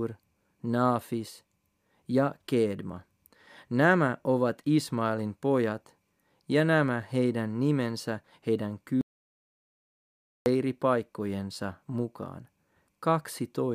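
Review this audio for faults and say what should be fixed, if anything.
Audio dropout to silence, 9.01 to 10.46 s: the speech cuts to silence for 1.45 s with no room tone, likely a lost input while recording continued. Secure input connections and monitor the live signal so a lost feed is caught during capture.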